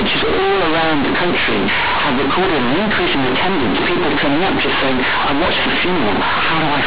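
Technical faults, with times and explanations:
Throughout: companded audio read as linear. The A-law telephone bytes get played as plain 8-bit samples without expansion, so quiet speech blasts as loud as peaks, giving harsh buzzy distortion and noisy pauses.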